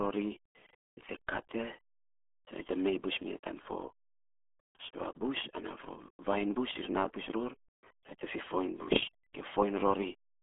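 Throughout the clip, the speech has passed through the RealAudio 14.4 codec, a dial-up-era RealAudio 1 coder whose starved data rate points to an 8 kbit/s stream. The band is squeezed to roughly 250 Hz to 3.4 kHz, with nothing at all above 3.7 kHz, so the voice sounds muffled and boxy. The heavy coding damage leaves a gargly, watery smear on every syllable, as the coder rebuilds the speech crudely from very little information.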